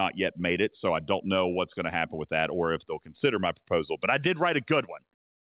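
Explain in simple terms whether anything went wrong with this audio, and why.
Nothing went wrong that I could hear in this speech recording; it carries over a phone-style call line, which is why nothing is heard above about 4 kHz, and that is normal for such a line.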